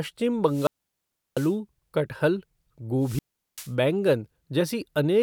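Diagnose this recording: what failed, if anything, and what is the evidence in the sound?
Wireless microphone squelch dropout, in the analogue radio link. It occurs at 0.46 to 1.56 s, muting 0.70 s, and at 2.99 to 3.74 s, muting 0.39 s. Each time the FM signal faded, and the receiver's squelch cut the output to near silence.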